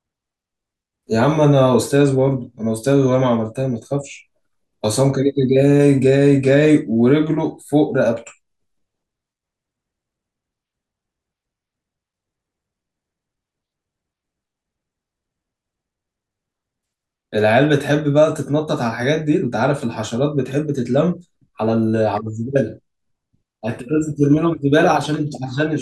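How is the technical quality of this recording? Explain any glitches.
No glitches or technical faults can be heard anywhere in this speech recording.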